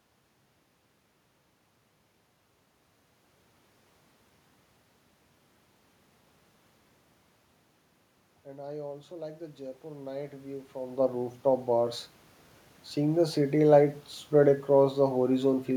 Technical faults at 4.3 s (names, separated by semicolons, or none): none